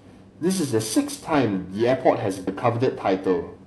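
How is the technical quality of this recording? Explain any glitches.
The recording has two faults, one running the whole way through and one brief glitch.

Throughout, the speech carries a rough, metallic edge that falls away in the pauses. That is periodic clock jitter: the converter's clock is being shaken at around 1.5 kHz, which puts sidebands at that spacing above and below every component of the sound, most strongly on the higher frequencies.

At 2.46 s there is a short glitch. That is damaged data in a compressed stream: a stretch of the encoded data was corrupted, so the decoder misread or dropped the frames there and lost sync until it found the next frame header.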